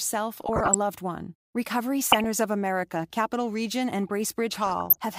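Speech, with three bursts of DAB burbling, from 0.37 to 0.75 s, 2.03 to 2.25 s and 4.53 to 4.97 s. Each one puts short noise blips over the voice. It's weak reception: bit errors, at a rate that points to something under half a percent, are slipping past the error correction into the MP2 data, so corrupted samples put short blips of noise into single sub-bands, and corrupted scale factors make sub-bands jump in level for up to a frame.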